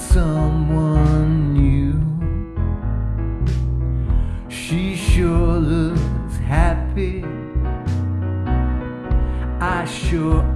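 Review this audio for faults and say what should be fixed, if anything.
Nothing stood out on listening, so there is nothing here that needs fixing.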